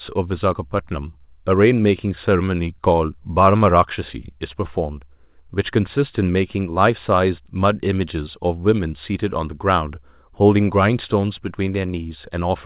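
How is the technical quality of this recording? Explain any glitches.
No audible glitches or faults.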